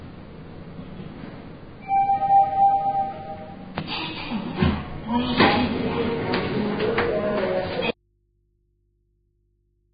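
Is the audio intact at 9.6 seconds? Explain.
No. At 9.6 seconds the sound is in an audio dropout to a faint residue, running from 7.91 s to the end. The signal cuts out abruptly. Only a low mains hum remains, far below the normal level. A broken input connection is the likely cause.

Vorbis compression also affects this moment. Nothing is heard above 4.9 kHz, and the remaining treble is hissy and grainy. This is likely heavy low-bitrate coding, around 14 kbps. The coarse quantising turns fine detail into noise.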